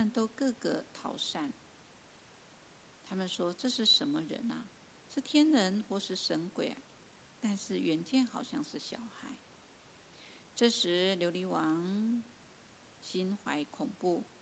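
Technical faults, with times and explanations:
No faults found; the speech carries the normal call-path character, with nothing above 8 kHz from the microphone processing and codec band limit, and room noise sitting about 26 dB below the speech.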